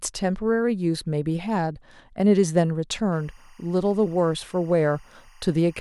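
Timecode bleed runs from 3.12 s to the end of this speech clip. Linear timecode from a neighbouring track or cable has leaked into the audio path. Its square-wave code flips between two pitches near 1 kHz and 2 kHz, so a steady, chirping warble sits faintly behind the speech, roughly 35 dB below it. The rhythm of the chirping fits code running at 24 frames per second.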